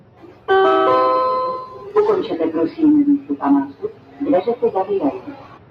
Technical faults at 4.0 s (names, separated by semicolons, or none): noise suppressor applied to music or sounds; sound cut by the noise suppressor